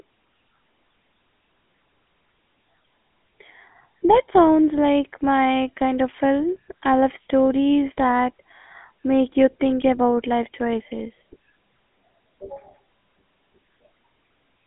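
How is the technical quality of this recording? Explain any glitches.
The quality is limited by telephone-style coding across the whole recording. The fault is the GSM full-rate codec, running from start to end. It models the vocal tract and drives it with a sparse, regularly spaced pulse excitation, giving the speech a plainly audible buzzy, gravelly roughness consistent with 13 kbps GSM. The band runs only from about 200 Hz to 3.5 kHz; a spectrogram shows a hard ceiling at 3.5 kHz and an empty low end.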